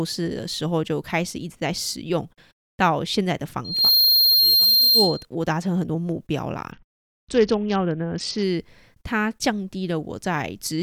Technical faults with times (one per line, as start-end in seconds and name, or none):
3.64-5.25 loudspeaker feedback squeal
6.71-8.43 Bluetooth SBC bit pool drop